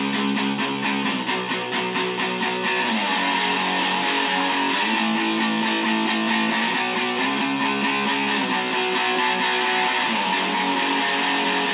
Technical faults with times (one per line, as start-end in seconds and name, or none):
none